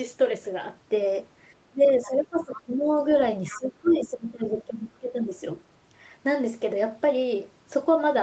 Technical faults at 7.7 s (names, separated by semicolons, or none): none